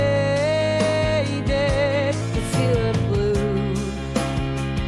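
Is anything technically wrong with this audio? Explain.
Yes. From 2.21 s to the end there is a wrong sample rate fault. The sound is played back about 1.09 times faster, raising pitch roughly 1.5 semitones. This fits 22 kHz audio played at 24 kHz.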